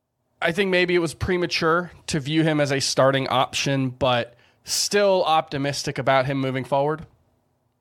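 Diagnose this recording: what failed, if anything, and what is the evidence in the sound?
A wireless microphone noise hit breaks into the analogue radio link between 4.66 and 4.85 s, right after "a starting option but" and before "optimistic about him moving". For about 0.19 s, a burst of static swishes over the speech as multipath reflections cancel the FM carrier and receiver noise surges. On a spectrogram it shows as a broadband noise smear, and the waveform shows a ragged, hash-filled patch.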